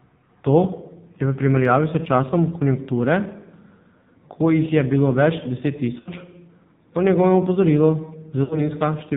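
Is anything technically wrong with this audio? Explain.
Yes, there are two problems.

Throughout, the speech has passed through the AMR narrowband mobile codec. Nothing above 4 kHz survives, and the voice sounds buzzy and synthetic, which points to one of AMR-NB's low modes, around 5.9 kbps. The codec rebuilds the voice from a vocal-tract model driven by sparse pulses, so the damage is heavy. Simple band-limiting would only muffle the voice. Here the voice itself has that parametric, artificial texture.

The second problem is lost AMR speech frames, at 6.00 to 6.10 s and again at 8.44 to 8.61 s. Each gap fits about three 20 ms frames, roughly 60 ms of lost audio. When frames fail, the decoder keeps repeating the last good pitch and vocal-tract settings with falling gain. You hear the sound briefly stretched and warbling as it sinks toward silence, then a weak, rough restart. A hard dropout would cut off abruptly. 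This one is a held, fading smear.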